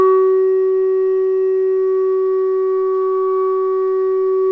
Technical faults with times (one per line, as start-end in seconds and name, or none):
none